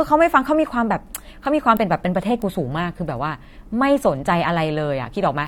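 Two sharp, isolated ticks cut through the speech, one at 1.45 s and another at 2.42 s, each lasting only a single sample and sounding like a bright broadband click with no relation to the talking around it. These are bit error spikes: a single bit flipped somewhere in memory or on a digital link, so one sample value leaps by a power of two and snaps straight back, leaving that instantaneous tick.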